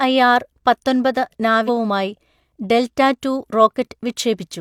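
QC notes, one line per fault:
1.64–1.70 s, stream segment skipped: the speech jumps abruptly forward with a brief blip at the join, as if a stretch of the programme simply isn't there, and the sound on either side doesn't connect. The likely cause is a segmented stream where one chunk failed to arrive or load and the player moved straight on to the next one, so the waveform is spliced without any crossfade or concealment.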